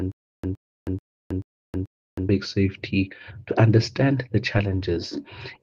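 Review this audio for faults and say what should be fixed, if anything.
Stutter with silent gaps runs from the very start to 2.29 s. A short burst of about 116 ms plays, then about 318 ms of digital silence follows, and the pair repeats on a steady 435 ms cycle, five times in all. The pattern points to a likely stalled player or stream: each retry replays the last buffered fragment, runs dry, and waits again, so the audio meant for those gaps never arrives. Deeper buffering with a rebuffer-and-resume strategy, rather than looping the stale fragment, would prevent this.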